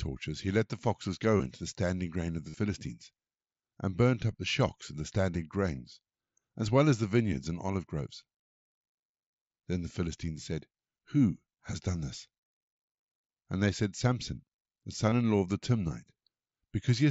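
Concealed Bluetooth headset packet loss appears at 1.38 to 1.40 s, 2.49 to 2.57 s and 15.10 to 15.12 s. Lost headset packets were patched by repeating recent waveform, so instead of the silent gap of a plain dropout, there's a brief buzzy hold. It's longest at 2.49 s, with runs up to 45 ms, followed by a slight warble as real audio resumes.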